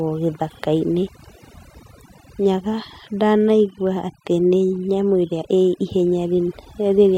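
Overdone noise removal runs through the whole speech clip, from start to finish. A noise reduction stage set far too aggressively has cut individual frequency bands down or out wherever they sit close to its noise estimate, and the quieter parts of the voice were caught along with the noise. Between phrases the background drops to near silence scattered with twinkling, glassy specks.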